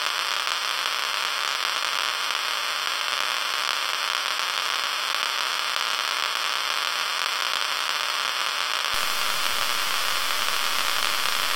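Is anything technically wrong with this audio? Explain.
Yes. Low bit depth without dither runs from 8.94 s to the end at 11.55 s. The likely cause is that the audio was truncated to about 5 bits with no dither, leaving only a few coarse amplitude steps. Because the rounding error follows the waveform instead of being randomised, it becomes grainy distortion roughly 10 dB below the sound itself. Quieter passages turn harsh and gritty, and the faintest moments sputter between steps or drop out.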